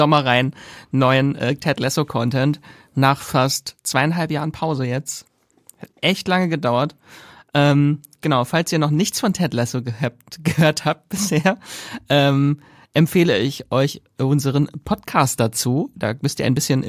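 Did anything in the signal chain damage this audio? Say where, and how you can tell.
No, nothing audible in this speech recording points to damage at any stage of the signal chain.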